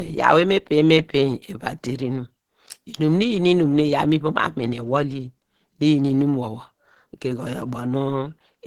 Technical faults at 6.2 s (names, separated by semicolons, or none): low-bitrate audio saved at a high bitrate